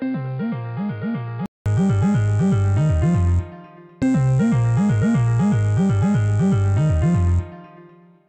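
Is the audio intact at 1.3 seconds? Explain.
No. At 1.3 s the audio sits inside a span from 0.0 to 1.66 s that sounds like an input switched to a poorer device, most likely a change to a lower-grade microphone or a headset's call profile. That narrower path carries nothing above 4.9 kHz, so the sound is dull and boxy, roughly 10 dB quieter, with a faint noise floor of its own well below the signal. A 200 ms silence marks the switch back to the fuller input.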